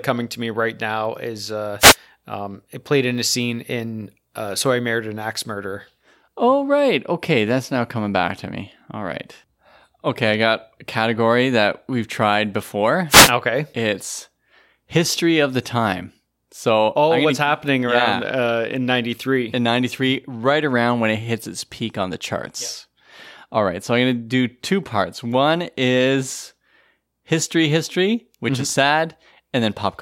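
Speech with two wireless microphone noise hits, at 1.79–1.96 s and 13.09–13.31 s, where the FM radio signal faded and receiver noise rose into a short swish of static. Each shows as a vertical broadband smear on the spectrogram and a fuzzy thickening of the waveform.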